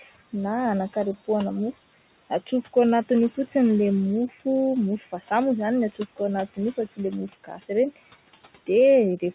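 A speech recording with speech cut by the noise suppressor in four places. The suppressor mistakes quiet speech for background and turns it down. At 0.00 to 0.12 s, just before "na anakarepohana mofo atsofoka", the level drops by about 12 dB. It dips by about 9 dB at 4.29 to 4.46 s, and by about 11 dB at 4.99 to 5.24 s, before "moa izany". The deepest cut, about 13 dB, is at 7.44 to 7.70 s. Each leaves a brief swallowed stretch.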